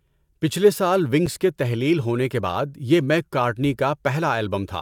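At 1.26 s, between "پچھلے سال" and "کے تحلیل ہونے کے", the playback path likely failed to fill its output buffer in time, leaving a block of digital silence about 6 ms long, which fits a 256-sample buffer. The speech drops abruptly to silence and returns, so the hole is heard as a brief tick.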